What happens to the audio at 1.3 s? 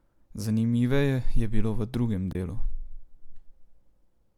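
Nothing goes wrong at 1.3 s; the speech carries on intact through that moment.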